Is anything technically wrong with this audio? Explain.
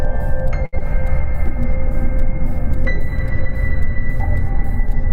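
Yes, two network faults close together. From 0.65 to 0.75 s there is a short stall from a late packet. The jitter buffer ran dry and the receiver stretched the last sound for about 72 ms until the data arrived, so a sound hangs on with a faint buzz or dip. From 0.79 to 0.82 s there is a short concealed packet loss. About 40 ms of audio never arrived, the receiver patched it with extrapolated sound, and the delay dropped by roughly 20 ms, leaving a brief smear or wobble.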